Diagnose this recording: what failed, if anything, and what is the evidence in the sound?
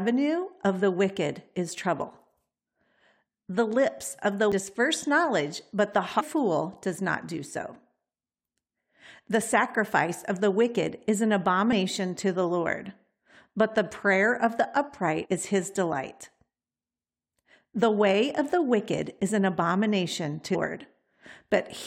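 Damaged data in a compressed stream shows up at 4.52 s (between "lips of the" and "knowledge but the"), 6.19 to 6.21 s, 11.69 to 11.73 s (after "the wicked is an"), 15.24 to 15.26 s (after "the prayer of the") and 20.54 s. Each is a brief chirp or blip lasting a few tens of milliseconds. The fault lies in the codec stage. Corrupted bytes make the decoder misread frames, lose sync and resume at the next valid frame header.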